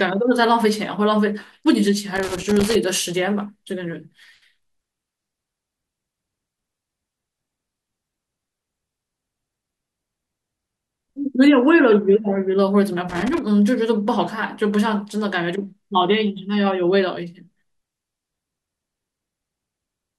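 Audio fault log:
2.16 to 2.75 s and 13.09 to 13.39 s: loose connector crackle. The speech breaks into irregular scratchy bursts, about 0.6 s and then 0.3 s long. A worn contact is making and breaking as it moves, chopping the signal, and any DC on the line adds pops.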